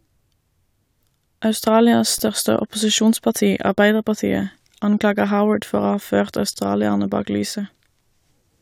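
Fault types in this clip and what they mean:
Underrun with held sample: at 2.18 s and again from 6.54 to 6.56 s, the output buffer ran dry and the converter froze on its last value, so the waveform goes flat and the speech briefly stops with almost no click. The gaps last about 12 ms and 23 ms, which fits one and then two 512-sample buffers. Playback resumes where it paused, with essentially nothing lost, so each restart is soft.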